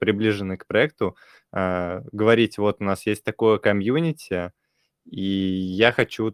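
No technical faults can be heard anywhere here.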